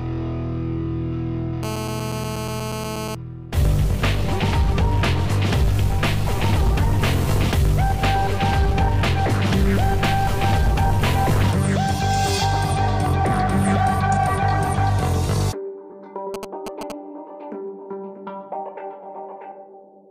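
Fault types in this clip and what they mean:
GSM phone buzz: A nearby 2G phone in a call pulses 217 times a second. The circuit rectifies this into a raspy buzz, about 9 dB below the signal, from 1.63 to 3.15 s.
GSM signalling bursts: Short groups of phone bursts get rectified into galloping ticks and brief 217 Hz buzzes. They come at roughly 10 dB below the signal, from 16.34 to 16.92 s.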